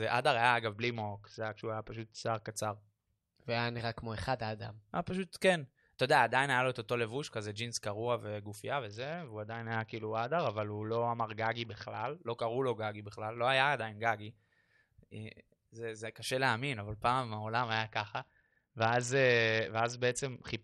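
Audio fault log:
0.73–2.51 s, 8.87–12.17 s and 17.58 s to the end: Bluetooth SBC bit pool drop. The treble dulls and gritty noise rises each time. The top bands lose their bits and the rest are coarsely quantised. This fits a bit pool falling from 31 to 7, about 61 kbps.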